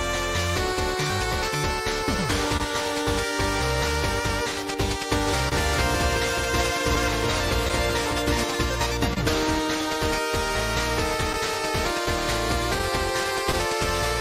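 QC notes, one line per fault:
Throughout: clock drift between sender and receiver. The sender runs about 1.5% slow. The buffer keeps draining, so small timing hiccups recur at uneven intervals.
1.11–2.63 s: scattered short gaps. About three brief holes, the longest roughly 30 ms, are patched by continuing the last sound. They leave ticks and smears.
5.27–8.62 s: doubled audio track. A full-band copy trails about 400 ms behind, about 5 dB quieter, with no room colour. It likely comes from a second, slower capture path.
5.49–5.55 s and 9.14–9.20 s: short stall from a late packet. The buffer runs empty, so the last sound is held 28 ms and 30 ms.
11.33–13.56 s: scattered short gaps. About four small holes, the longest roughly 15 ms, are filled by extending the previous sound. They cause brief hiccups.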